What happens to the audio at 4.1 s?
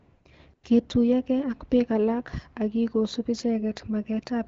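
Nothing goes wrong at 4.1 s: the speech carries on intact through that moment, with only the light, steady coloring of the AMR wideband (HD Voice) codec at 12.65 kbit/s that runs throughout.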